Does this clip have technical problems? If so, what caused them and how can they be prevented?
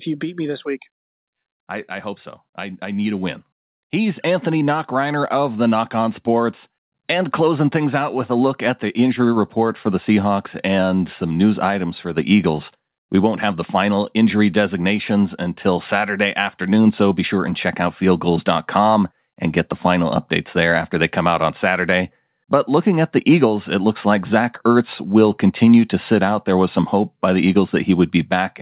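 Yes. Automatic gain rising from 0.2 to 8.3 s lifts the level about 9 dB; voice and background swell together, unlike someone moving closer. Prevent it by setting input level beforehand or locking the gain.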